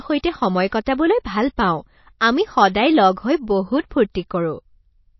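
Speech throughout, carrying plainly audible damage that is likely from MP3 compression at a low bitrate, roughly 28 kbps by the sound of it. The treble is cut off flat at about 5.8 kHz, so a spectrogram shows a hard ceiling with nothing above it. Below that, weak frequency lines blink on and off from frame to frame, leaving speckled holes. The result sounds watery and swirly, with chirpy, metallic s sounds and softened attacks.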